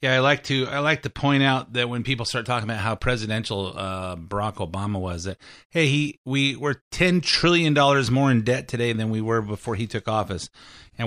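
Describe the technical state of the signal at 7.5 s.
The speech at 7.5 s is intact, with no audible fault at that point.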